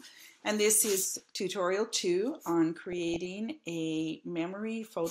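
The audio is dull and granular for its whole length, with a gurgling edge and upper frequencies that come and go. This is likely MP2 compression at a low bitrate, with coarse quantisation that points to something around 80 kbps. Layer II runs out of bits for its upper sub-bands and switches them off. On a spectrogram the top end shows as a ragged ceiling, with blocks of high-frequency energy flickering in and out frame by frame. Over this, DAB burbling appears from 1.07 to 1.39 s and again, longer, from 2.82 to 3.31 s: short blips of noise in single sub-bands on top of the programme. Bit errors in the range of a few tenths of a percent slipped past error correction and corrupted samples in the audio data. The spectrogram shows isolated bright horizontal dashes in narrow bands, and the waveform has brief irregular bumps. The second burst spans more frames than the first.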